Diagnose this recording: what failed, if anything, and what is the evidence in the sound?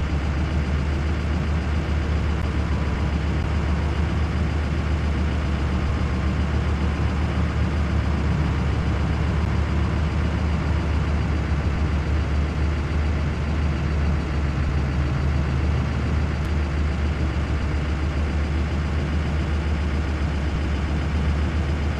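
Playback-side streaming fault: gaps between stream segments. There are hard-edged dropouts to silence at 2.42, 3.43, 9.45 and 16.45 s, lasting about 12.5, 10.5, 8.6 and 5.3 ms. Timestamps on adjacent one-second segments don't quite meet, so the player pads the hole with silence. Nothing is actually lost.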